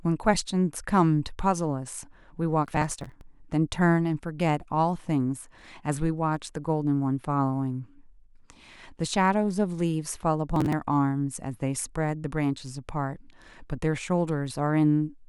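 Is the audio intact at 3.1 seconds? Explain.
No, 3.1 s sits inside a burst of processor overload crackle from 2.65 to 3.21 s: dozens of roughly 10 ms buffers get skipped, leaving hard-edged gaps that sound like gritty tearing.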